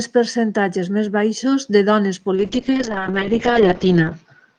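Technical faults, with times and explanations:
2.37–4.58 s, call bitrate drop: after "més baixos de dones" the sound turns coarse and muffled as the encoder is starved of bits, and the top end falls from 12 kHz to 8 kHz; it stays steady and gapless, unlike packet loss.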